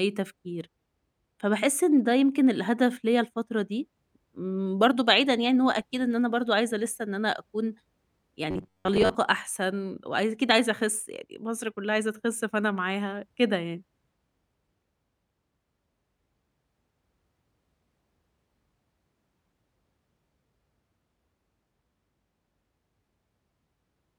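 From 8.51 to 9.15 s, audio likely arrived too seldom and short buffers looped, giving robotic sound from repeated short buffers: metallic 93.8 Hz buzz.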